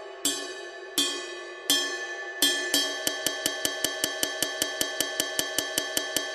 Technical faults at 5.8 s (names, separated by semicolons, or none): broken-record loop